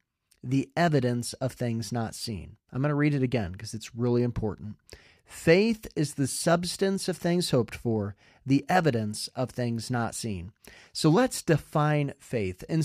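Speech, with no audible faults.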